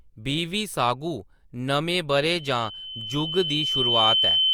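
From 2.14 s to the end of the clip, a single piercing tone near 3.1 kHz rises out of the speech, swelling over roughly two seconds into a sustained squeal that ends up a little louder than the talker. This is loudspeaker feedback squeal: the microphone is picking up the loudspeaker it feeds, and around 3.1 kHz the loop gain has climbed past one, so that frequency keeps reinforcing itself on every trip around the loop.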